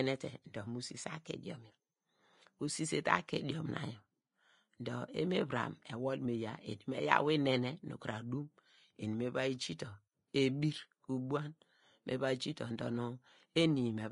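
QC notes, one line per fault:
Throughout, Vorbis compression: the speech sounds hissy and grainy, with nothing above 10.6 kHz, consonant attacks smeared and tones rough. That's likely a low-quality Vorbis encode, which fits a bitrate down around 32 kbps. At that setting the encoder pulls the cut-off down and quantises the upper range so coarsely that the fine detail there gets swapped for noise of roughly the same energy, hence the fizz in place of real top end.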